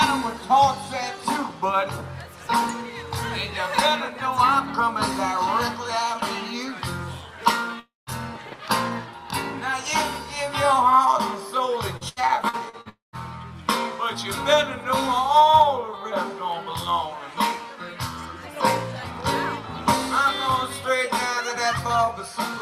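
At 7.79 s the sound breaks off and runs as a fading buzz for a short while, then drops into silence for about 180 ms. Normal audio returns at 8.10 s. Roughly 280 ms of material never plays. This is a long network dropout, likely caused by a stall in delivery. The receiver stretched the last sound to cover the hole and then gave up.

From 11.97 to 12.88 s the audio turns choppy. Five short holes appear, the longest 77 ms. Each is patched by repeating the preceding sound, so about a quarter of this stretch is filler. This is repeated packet loss, heard as a robotic sound.

Straight after, at 12.89 s, a second long network dropout begins. A brief smeared tail gives way to about 150 ms of silence. The audio resumes at 13.16 s, about 240 ms short.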